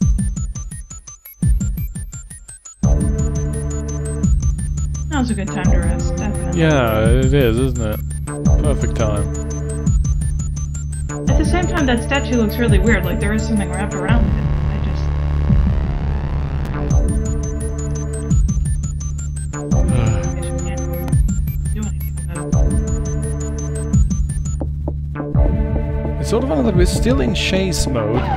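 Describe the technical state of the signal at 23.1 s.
At 23.1 s the signal is intact, with no fault present at that moment.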